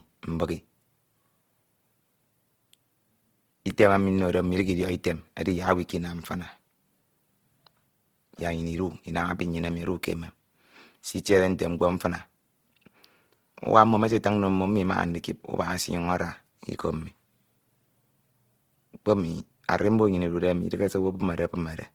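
A speech recording with plainly audible Opus compression damage from start to finish, likely from encoding in the codec's CELT mode at a rate consistent with about 16 kbps. Speech sounds rough, grainy and noisy rather than swirly, because starved bands are filled with folded or noise content. On a spectrogram, energy stays present across the full band up to 20.2 kHz, but the harmonics look speckled and smeared instead of clean.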